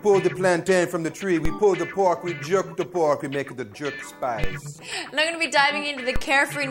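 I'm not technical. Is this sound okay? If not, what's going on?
No. There are three DC steps, at 1.45, 4.44 and 6.16 seconds. Each time, the signal's resting level suddenly jumps, causing a low thump before settling back.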